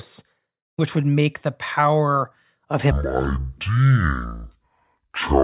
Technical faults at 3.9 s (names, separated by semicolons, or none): wrong sample rate